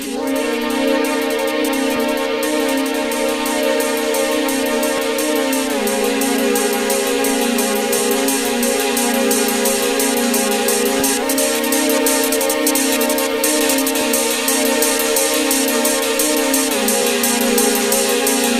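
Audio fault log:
4.98, 7.99, 11.00, 14.01 s: overlapping chunks. Each 3 s chunk starts 12 ms before the previous one ends, so 12 ms of audio plays twice at each join, heard as a click or stutter. The waveform shows a duplicated stretch with a discontinuity; the spectrogram shows a thin vertical streak.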